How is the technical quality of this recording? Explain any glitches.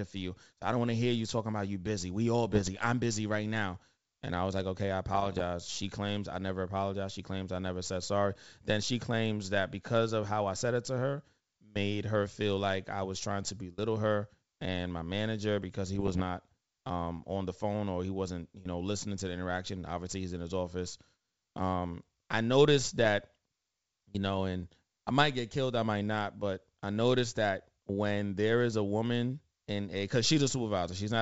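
The recording has four short glitches from bit errors on an ADPCM link. They fall at 2.50–2.71 s, just before "I'm busy right now"; at 5.12–5.43 s, after "was like okay I"; at 15.95–16.23 s, after "my manager because he"; and at 22.78–23.06 s. Corrupted bits throw the decoder's step size and predictor off, so each error rings on for milliseconds. You hear pops and rough, gritty bursts with brief level jumps. On a waveform they appear as spiky, uneven amplitude. A spectrogram shows vertical broadband smears. The G.722 wideband coding, meanwhile, keeps its faint upper-band hiss.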